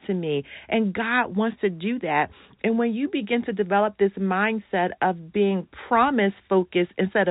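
No faults are audible in this speech; it comes through the G.711 telephone path, which passes nothing above about 3.8 kHz.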